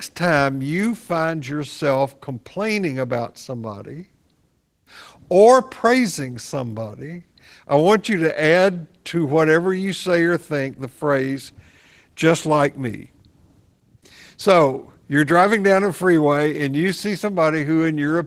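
It's a speech clip carrying Opus voice compression from start to finish, and the damage is plainly audible: the voice comes across hoarse and a bit robotic. The hybrid coding, a linear-prediction core plus a coarse transform layer above 8 kHz, points to a starved bitrate around 16 kbps.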